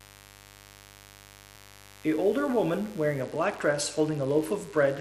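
Speech runs through a steady, raspy mains buzz, roughly 25 dB below the voice, from switching spikes on a 50 Hz supply. A spectrogram shows it as evenly spaced horizontal lines at multiples of 50 Hz, stacked from the bottom of the display and present for the whole clip. At 3.22 s a Bluetooth SBC bit pool drop sets in and lasts to the end. The treble dulls and a gritty noise rises, which fits the encoder cutting its bit pool from about 31 to 12, near 88 kbps, on a congested link. The spectrogram's upper region goes empty above a sharp ceiling, with coarse, speckled texture below it. At 3.54 s roughly 10 ms of audio is missing between chunks, heard as a tiny skip. The waveform shows an abrupt step where the two sides join without any silence between them. It likely falls at a recorder chunk boundary, and the timing fits 2-second chunks.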